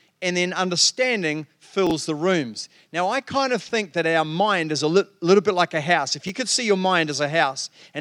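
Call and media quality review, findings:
Chunks out of order in the speech at 1.87 to 1.91 s, then 3.69 to 3.71 s and 6.27 to 6.29 s. Brief jumbled blips at the hard joins. A late roughly 10.7 ms chunk plays after its successors.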